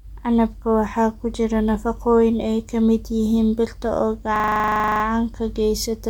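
From 4.36 to 5.04 s a system hang loop occurs: the system or driver stalled while the sound hardware kept replaying one 40 ms stretch of its buffer, 17 times. The speech gives way to a rigid, mechanical buzz repeating at 25 Hz.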